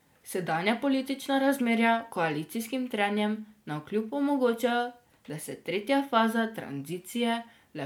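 Throughout the speech, generation loss: a swirly, hollow smear with blurred attacks, worse than one MP3 pass at roughly 128 kbit/s would give, likely from about four re-encodes.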